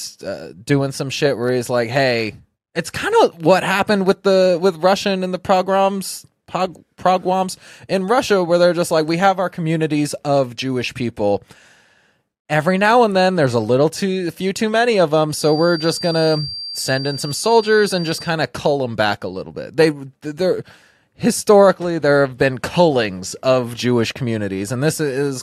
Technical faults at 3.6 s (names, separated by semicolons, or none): none